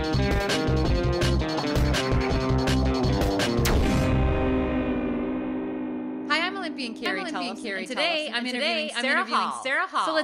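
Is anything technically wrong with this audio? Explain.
Yes. From 7.06 s to the end, a doubled audio track appears, likely from a second, slower capture path mixing the same signal back in. A full-band copy trails about 0.7 s behind at roughly equal loudness, starting abruptly with no decay or room colour.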